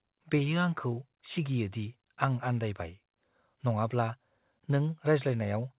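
There are no technical faults to describe in this speech; the call path's cut-off at 4 kHz is normal for its codec.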